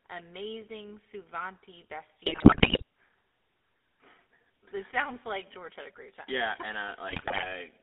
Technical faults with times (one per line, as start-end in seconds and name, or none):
0.00-7.82 GSM full-rate codec
2.26-2.82 GSM bit errors
7.08-7.46 GSM bit errors